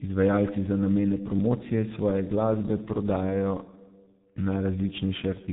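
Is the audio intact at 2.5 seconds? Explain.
No. At 2.5 seconds the speech carries tandem speech coding, a fault present across the whole clip. The audio appears to have passed through CVSD at 64 kbit/s, then G.711 mu-law, then G.723.1 at 6.3 kbit/s, so two speech coders ran in a row, each re-encoding the previous coder's errors. The result sounds rough, muffled and warbly, with nothing above 3.8 kHz.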